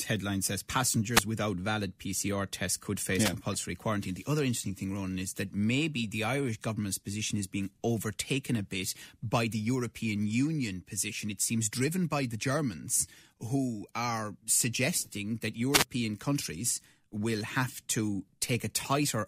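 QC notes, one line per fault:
1.12–1.24 s, 3.23–3.32 s, 15.71–15.85 s: wireless microphone noise hit. Brief swishes of static over the speech as the FM radio link faded under reflection cancellation, letting receiver noise surge.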